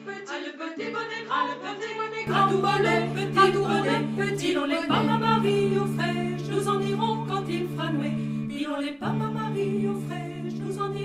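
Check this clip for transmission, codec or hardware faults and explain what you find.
One fault is present, at the very start of the clip.

Input switched to a poorer device, 0 to 2.27 s: the capture likely ran through a lesser microphone or headset path before switching, so this opening stretch has nothing above 7.6 kHz, sounds dull and boxy, sits about 10 dB quieter, and carries a noise floor roughly 30 dB below the signal. The change happens without any gap.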